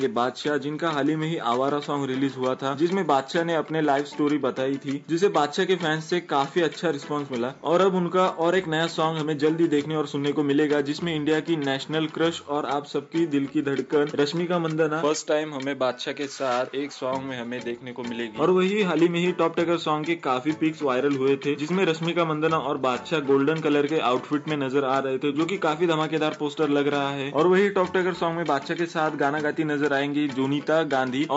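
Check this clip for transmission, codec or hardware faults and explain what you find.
Nothing here sounds wrong to my ears; I couldn't find any transmission, codec or hardware trouble anywhere in the audio.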